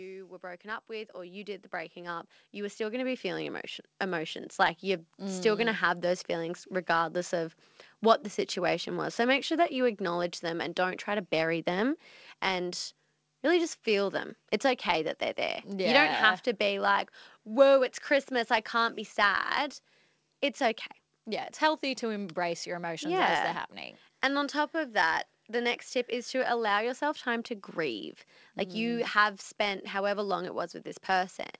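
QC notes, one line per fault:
0.4–6.69 s, automatic gain rising: the AGC judged the input too quiet and raised its gain step by step by about 15 dB, so voice and background swell together until the level settles just before "regardless of what the", over audio band-limited at 8 kHz.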